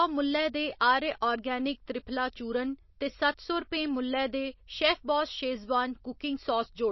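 From start to finish the speech sounds band-limited and watery, with nothing at all above 5.8 kHz and a swirly, warbling texture on the sibilants. That's likely MP3 compression at a very low bitrate, around 27 kbps, where the encoder chops the treble and drops quieter detail frame by frame.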